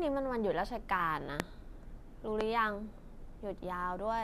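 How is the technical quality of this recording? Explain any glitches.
Two loud pops interrupt the speech. A brief voltage spike, likely from a switch, a plug contact or a static discharge, was added to the signal, and the circuits downstream shaped it into a short burst. The first pop runs from 1.40 to 1.42 s and stands roughly 25 dB above the speech. The second, from 2.41 to 2.43 s, is about 20 dB above it. Each is a single sharp crack, and the speech continues underneath.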